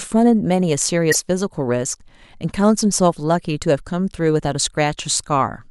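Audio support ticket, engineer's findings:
Damaged data in the compressed stream, 1.09 to 1.16 s: short disruption in the speech. Decoder loses sync on bad frames and skips ahead to the next header.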